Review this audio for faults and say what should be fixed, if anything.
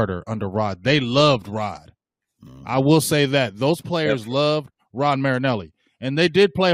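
Nothing needs fixing: the speech signal comes through intact, with no audible technical faults anywhere in the recording.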